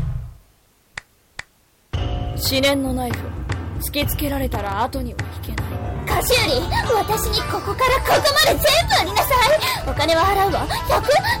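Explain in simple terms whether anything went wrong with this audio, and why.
Two things went wrong. Throughout the clip there is hard clipping. The audio was pushed far louder than one stage could carry, so the tops of loud moments were sliced flat. That adds a harsh fuzz on every loud sound, and it never goes away. It follows the loudness of the sound, not the clock.

There is also processor overload crackle, from 4.55 to 4.79 seconds and again, longer, from 9.42 to 9.85 seconds. The computer fell behind on tiny audio chunks, each well under a millisecond long, which fits a very small buffer. Instead of fresh sound it replayed stale scraps, producing a gritty tearing burst. Unlike the clipping, it comes in short bursts at set times and then stops.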